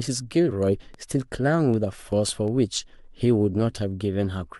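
At 2.12 s the speech jumps forward, a case of compressed frames skipped: the decoder never played a short run of encoded audio, which points to a couple of missing or rejected frames, around 30 ms lost.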